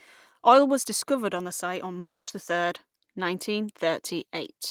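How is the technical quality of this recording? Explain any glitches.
There's one real glitch. From 1.99 to 2.29 s, just before "the third nineteen", you get a long network dropout, likely from packets that never arrived. The last sound drags on as a fading buzz or hiss, drops to about 190 ms of near-silence, and roughly 280 ms of speech is simply gone when the audio picks back up.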